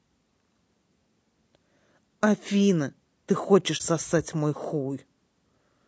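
From the start the speech has a rough, grainy texture that is plainly audible across the whole clip, most likely from low-delay AAC compression of the AAC-ELD kind used in video calls, at a rate that fits about 32 kbps. Its short frames separate the voice's harmonics poorly, so noise fills the gaps between them. On a spectrogram the harmonic stripes look smeared and speckled, with a thin, patchy top band instead of clean high-frequency detail.

At 3.77 s there is AAC frame loss with muting, lasting until 3.81 s. The missing stretch, consistent with a single lost frame of about 30 ms, was decoded as silence, and the overlapping windows ramp the sound down and back up around it. It is heard as a brief soft-edged dropout. The waveform shows a short tapered dip to near zero, and the spectrogram shows a narrow vertical gap across all frequencies.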